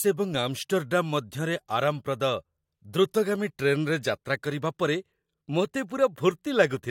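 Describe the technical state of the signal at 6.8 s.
At 6.8 s the audio is intact, with no dropout, distortion or other fault audible at that point.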